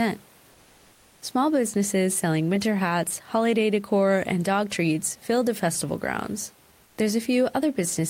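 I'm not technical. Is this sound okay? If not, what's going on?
No. At 6.85 to 6.97 s, just after "fill the festival grounds", the real background is briefly replaced by smooth, featureless comfort noise, likely from the sender pausing transmission during silence.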